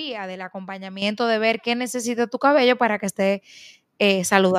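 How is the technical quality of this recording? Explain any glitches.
The level jumps twice. At 1.02 s and 2.04 s the microphone volume steps up, by about 9 dB then about 5 dB. Automatic input gain raised the device level, lifting speech and background together.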